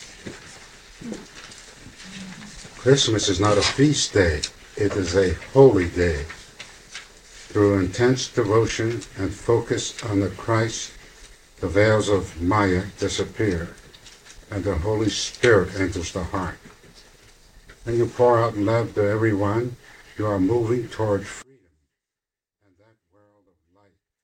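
From 21.42 s to the end, the sound drops about 41 dB to a faint residue, not silence: likely one channel inverted, cancelling in mono.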